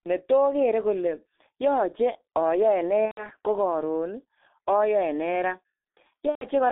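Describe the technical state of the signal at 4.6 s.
At 4.6 s the speech is still passing through the G.723.1 codec that shapes the whole clip. Its coarse 30 ms frames and heavy data reduction, fitting roughly 6 kbit/s, within a band of about 250 Hz to 3.6 kHz, leave the voice muffled and hoarse with smeared consonants.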